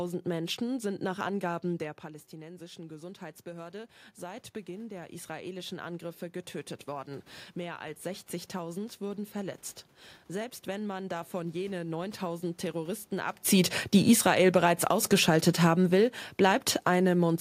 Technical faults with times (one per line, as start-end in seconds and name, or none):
1.79-6.29 automatic gain rising
13.53-17.36 automatic gain falling